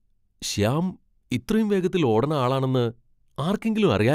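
No technical faults can be heard anywhere in this speech recording. Nothing breaks up, drops out or distorts at any point.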